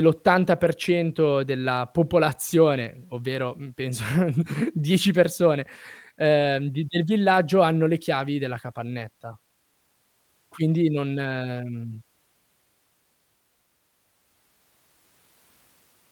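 Nothing stood out on listening to the speech in this recording.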